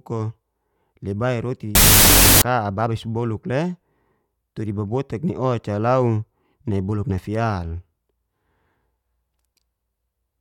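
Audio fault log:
1.75–2.42 s, wrong sample width: loud broadband hash fills the waveform and spectrogram, burying the speech at half speed and an octave down, which fits 32-bit float data read as 16-bit integers.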